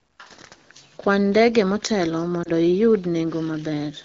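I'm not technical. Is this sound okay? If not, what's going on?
No. At about 2.44 to 2.50 s, just after "ndege motelo", one lost AMR speech frame meant the phone filled a 20 ms gap with a guess, causing a brief dip or warble.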